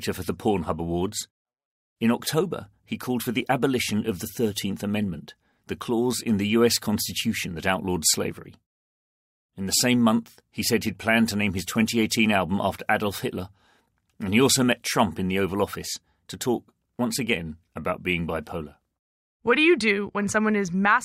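No technical faults are audible.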